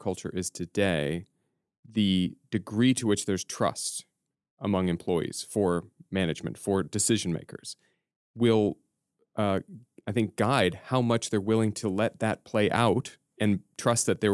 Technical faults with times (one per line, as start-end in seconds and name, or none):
none